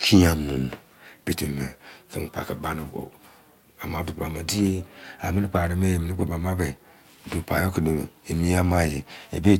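No technical faults turn up anywhere in this recording of speech.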